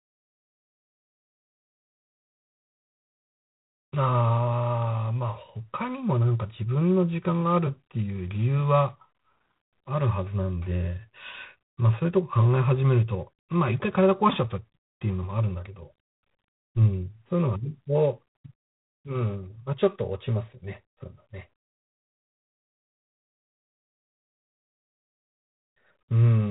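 G.726 ADPCM coding runs through the whole speech clip. The sound points to the 24 kbit/s mode, with only three bits a sample describing the error of an adaptive prediction. Nothing passes above 4 kHz. A harsh, rasping hiss rides on the speech and rises and falls with its level.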